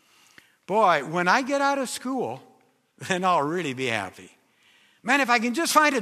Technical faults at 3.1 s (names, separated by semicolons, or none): none